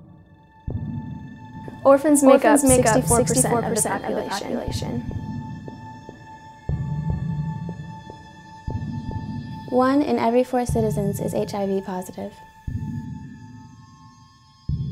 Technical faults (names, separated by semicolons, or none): doubled audio track